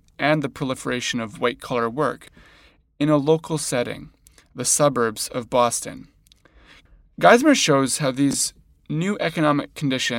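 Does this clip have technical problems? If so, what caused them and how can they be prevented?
Yes, the speech has chunks out of order in two places. A 10 ms chunk reached the output late and played after chunks that should have followed it: three chunks late at 2.24 to 2.28 s, just after "proliferation of white collar", and two chunks late at 8.31 to 8.34 s, after "shows how". Nothing is lost, but each reordering leaves three hard joins, heard as a brief jumbled stutter. Strict sequence numbering and reordering in the buffer prevent this.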